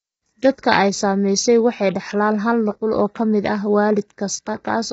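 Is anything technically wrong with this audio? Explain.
Yes. Throughout the speech there is heavy damage consistent with low-delay AAC compression, likely AAC-ELD of the kind used in video calls. At this low bitrate too few bits are left to code the voice's pitch harmonics cleanly, so noise fills the gaps between them and the voice sounds rough and grainy. The degree of damage fits a bitrate near 16 kbps, and nothing is present above 7.8 kHz. A simple low-pass filter would sound dull but clean, whereas this grain tracks the voice itself.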